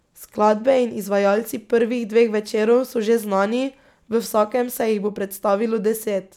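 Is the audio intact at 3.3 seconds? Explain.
Yes, the speech at 3.3 seconds is intact, with no audible fault at that moment.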